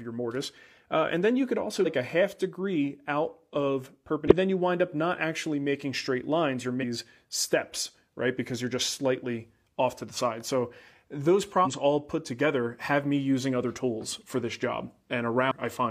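At 1.81–1.87 s, between "then you could also" and "a half degree out", the speech breaks up briefly: damaged data in the compressed stream. The decoder misreads the corrupted frames, loses sync and skips ahead to the next valid header. The same fault recurs at 4.28–4.33 s, after "half degree out of" and before "then you wind up", then at 6.78–6.84 s, 11.61–11.67 s just before "all put", and 15.47–15.53 s.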